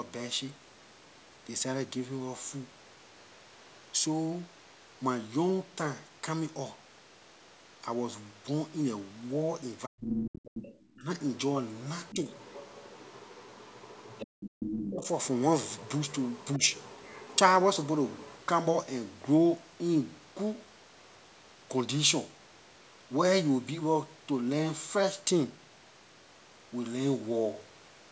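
From 9.85 to 10.25 s the talker's speech all but vanishes, dropping by roughly 40 dB, and it dips again by about 25 dB from 10.94 to 11.09 s. This is likely speech suppressed in double talk: with both sides speaking, the echo canceller turned down the near-end speech along with the echo. Overlapping that first gap, from 10.12 to 10.75 s, a second voice comes through only a few decibels below the talker, likely the other side's voice leaking through from the loudspeaker because the canceller left that echo in the microphone signal. A fainter leak, about 20 dB down, runs from 12.07 to 18.44 s. During it the talker is briefly ducked again, by about 20 dB from 12.12 to 12.26 s, by about 30 dB from 14.55 to 15.06 s, and very slightly, by about 5 dB, at 16.58 to 16.62 s.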